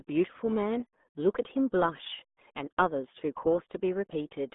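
From start to finish the speech passes through the RealAudio 14.4 codec: nothing reaches above 3.8 kHz, the band sits roughly 200 Hz to 3.5 kHz, and heavy gargly, muffled smearing fits a very low bitrate around 8 kbit/s. Plain telephone band-limiting would sound narrow but clean, without this warbling codec damage.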